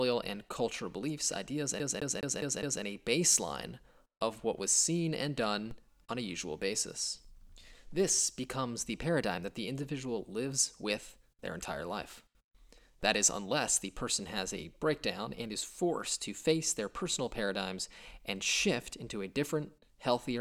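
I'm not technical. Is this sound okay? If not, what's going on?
No. From 1.80 to 2.83 s, right after "and cultural beliefs ideas", the CD is stuck on one turn. The same 0.21 s scrap of speech plays five times, with a tiny gap at each jump, like a scratched disc skipping back, before "a baseline of what" continues.

DC steps occur at 5.71 s, between "what was seen and" and "on a usual basis", and again at 13.03 s. Each time, the waveform's resting level suddenly jumps, making a low thump or click, then drifts back to centre while the speech carries on unchanged.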